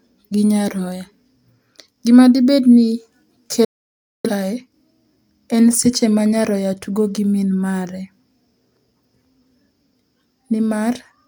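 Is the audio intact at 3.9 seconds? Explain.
No. A digital broadcast dropout runs from 3.65 to 4.30 s: the receiver lost valid frames and muted, fading out within about 3 ms. Roughly 0.6 s of speech vanishes, showing as a flat waveform and a blank vertical band across the spectrogram.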